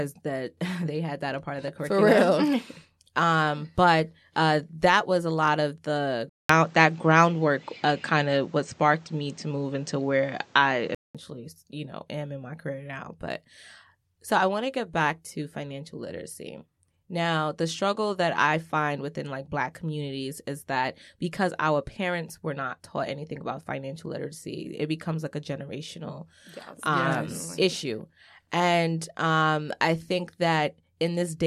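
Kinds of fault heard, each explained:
Input switched to a poorer device: from 6.29 s the speech drops out for about 200 ms, then returns a few dB different in level and duller, with nothing above 8.6 kHz and a new noise floor some 35 dB below the signal, until it clears at 11.15 s. On a spectrogram the upper band is cut off flat across that stretch. The waveform shows a short gap and a step in level. The likely cause is the recording input changing to a narrower-band microphone.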